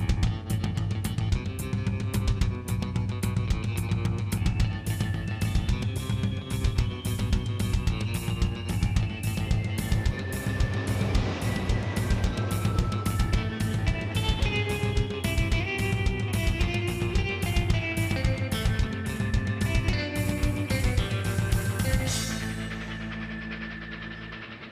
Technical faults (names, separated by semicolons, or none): none